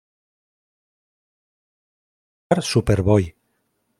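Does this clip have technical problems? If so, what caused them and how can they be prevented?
Yes. The clip opens in an audio dropout to silence that is already under way when it starts and runs to 2.51 s. For that whole stretch the signal is silent, with no room tone at all, and the speech then enters abruptly mid-flow. That pattern points to the input being lost upstream, most likely through a disconnected device, a failed link or an accidental mute, while the recorder kept writing empty samples. Any speech during that span is unrecoverable. Securing cable connections and monitoring input meters during recording prevents this.

There are also dropped samples at 3.24 s, heard as a single sharp click. Only a fraction of a millisecond of audio is missing, far too little to remove any audible sound, but the waveform jumps straight from one value to a later one. That discontinuity is what produces the click, which shows up as a thin vertical line across the spectrum. 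Using a larger audio buffer and avoiding CPU or disk load during capture prevents these skips.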